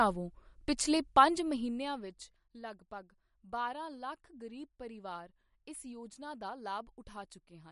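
From start to finish the speech carries plainly audible MP3 compression, most likely from a low-bitrate encode, something in the region of 48 kbps. There's nothing at all above 11.2 kHz, so the top end just stops. With so few bits, the encoder keeps dropping weaker frequency components and bringing them back frame by frame. That gives the sound its watery, swirly texture, makes the s sounds chirpy and metallic, and smears the attacks.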